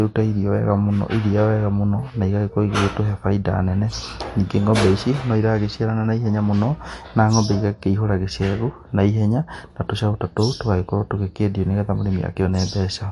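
From start to finish the speech has a watery, swirly quality, smeared consonant onsets and no content above 11.3 kHz, likely MP3 compression at a low bitrate such as 48 kbps. A spectrogram shows a flat ceiling there and speckled, flickering gaps below it.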